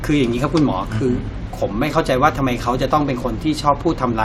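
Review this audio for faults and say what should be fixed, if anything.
No faults; nothing needs fixing.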